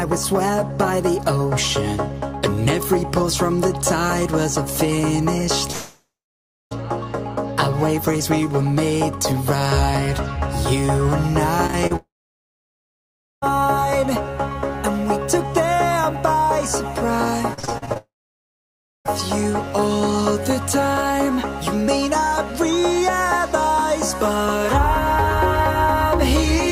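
At 5.71 s the sound cuts out for about a second. A brief fading buzz gives way to silence, likely a long network dropout, before audio resumes at 6.73 s with that part lost.

From 11.67 to 11.92 s, repeated packet loss leaves three short gaps, each patched by continuing the last sound. This gives a choppy sound.

A second long network dropout, likely, follows from 11.96 to 13.44 s. It is mostly silent for about 1.35 s.

From 17.54 to 17.97 s, nine gaps make the sound choppy and broken. Nearly half that stretch is patched.

Another long network dropout, likely again, then silences the audio until 19.07 s.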